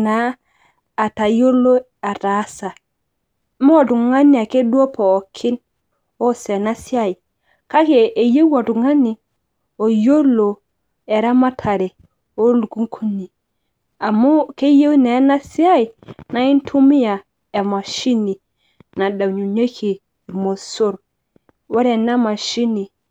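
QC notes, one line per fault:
No faults heard anywhere in this speech recording.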